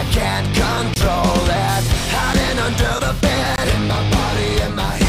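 Block of digital silence at 0.94 to 0.96 s, 2.33 s and 3.56 to 3.58 s: sound dropped to silence without fading, 20 ms holes and an 8 ms tick.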